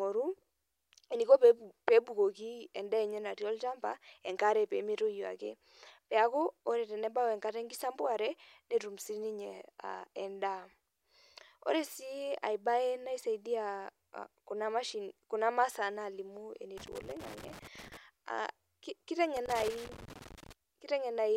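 A worn or dirty contact making and breaking chops the speech, heard as loose connector crackle: irregular scratchy bursts from 16.78 to 17.97 s and 19.36 to 20.52 s.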